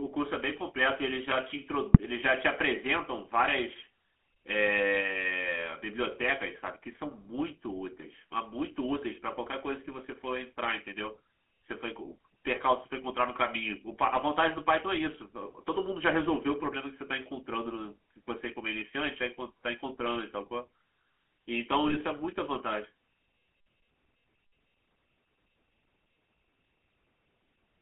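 The whole recording has passed through the GSM full-rate codec, which rebuilds the voice from a vocal-tract model driven by sparse, regularly spaced pulses. This fits a 13 kbps GSM link. The speech is plainly buzzy and gravelly, squeezed into a telephone band of roughly 250 Hz to 3.4 kHz.

From 1.93 to 2.0 s, and again from 21.88 to 22.03 s, GSM bit errors corrupt the decoder's filter, pitch and gain values over what sounds like a few consecutive frames. The speech briefly breaks into squawks, pops and a gargling smear.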